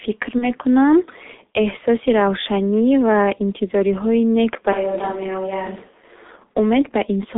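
Throughout, the speech has passed through the G.723.1 codec, whose heavy damage fits a very low bitrate near 6 kbit/s. Its line band runs only from 250 Hz to 3.6 kHz, and the coder updates its model of the voice in coarse 30 ms steps. The result is muffled, thin, hoarse speech whose consonants smear together and lose their edges, with a gritty, processed texture.

From 0.38 to 0.47 s there is VoIP packet loss concealed by the speech codec, fitting a single lost 30 ms frame. With no data arriving, the decoder kept extending the last pitch and filter it had, at falling gain. The gap is covered by a brief, fading synthetic sound instead of real speech, and the decoder's carried-over state leaves the voice weak and distorted for a moment after the data returns.

Right after "ва интизориҳои нек ба", from 4.73 to 6.37 s, the sound changes abruptly, most likely from a switch to a distant microphone after the close one dropped out. 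The voice becomes hollow and roomy and loses bass. It is roughly 10 dB quieter, and room noise rises to only about 30 dB below the speech. At 6.37 s the close, fuller sound returns just as suddenly.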